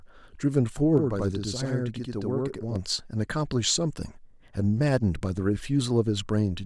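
Speech, with a doubled slap echo at equal level from 0.98 to 2.76 s: channel delay (doubling), one channel about 85 ms late, fitting a 2048-sample buffer, summed to mono.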